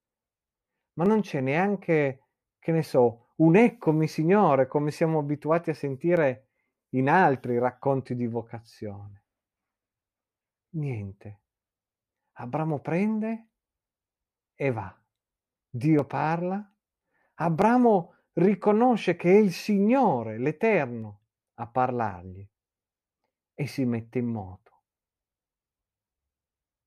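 Speech with single sharp clicks at 1.06, 6.17, 15.99, 17.62 and 21.02 s, likely dropped samples, each well under a millisecond lost, making the waveform jump.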